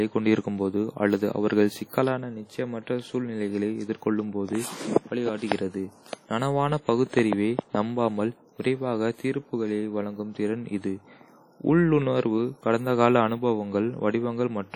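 Speech, with heavy transform-codec damage throughout. The sound rings and smears, with a washy hiss that swells and fades with the signal. Nothing remains above 18.3 kHz. The likely cause is WMA compression at a low bitrate, around 32 kbps.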